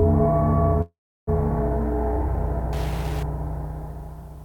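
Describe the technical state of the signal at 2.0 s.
At 2.0 s the signal is intact, with no dropout, clipping, glitch or other fault present at that moment.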